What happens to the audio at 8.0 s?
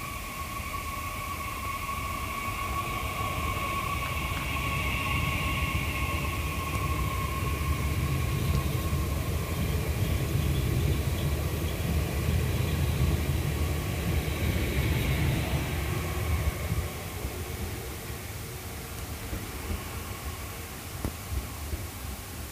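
At 8.0 s, as everywhere in the clip, the audio has low bit depth with dither: only 6 bits, randomised before rounding, so the error becomes a steady, even hiss roughly 15 dB below the signal. A spectrogram shows a flat noise floor across all frequencies; the waveform carries constant fuzz.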